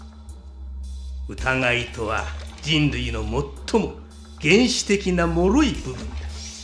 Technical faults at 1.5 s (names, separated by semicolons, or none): none